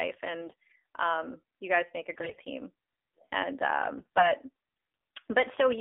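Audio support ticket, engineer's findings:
AMR narrowband mobile codec, full clip. Speech band-limited to roughly 300 Hz–3.6 kHz, nothing above 4 kHz. Buzzy, synthetic vocal quality from the vocal-tract model with sparse pulse excitation; the thin, coarse rendering fits AMR-NB around 7.4 kbps.

AMR bit errors at 0.41–0.83 s, 2.14–2.39 s and 3.98–4.32 s. Speech turns hoarse, scratchy and gargly while keeping roughly its pitch and level. Probable component: weak radio link. Flipped less-protected bits, roughly one in ten, misplace excitation pulses and skew pitch, gain and spectral parameters.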